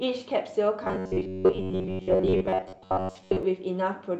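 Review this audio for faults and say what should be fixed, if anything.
From 0.84 to 3.43 s the speech becomes a rigid, metallic buzz pitched at 93.8 Hz, with roughly 70% of the sound replaced by repeats. This is robotic sound from repeated short buffers. New audio likely arrived too seldom, so the last 10.7 ms or so was replayed over and over while the real audio was skipped, and that steady repetition sets the fixed buzz pitch. To prevent it, keep the buffer fed on time by stabilising delivery and giving the jitter buffer enough headroom so it never has to loop stale audio.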